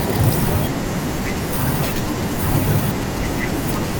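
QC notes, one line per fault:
3.84–3.95 s, GSM phone buzz: a short, hard, raspy buzz near the end, sitting about 17 dB under the speech. A 2G phone on a call pulses at 217 Hz, and the audio circuitry rectifies those bursts into a harmonic-rich drone.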